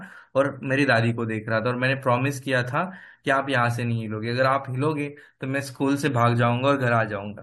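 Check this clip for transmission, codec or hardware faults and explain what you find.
Nothing wrong can be heard anywhere in this recording.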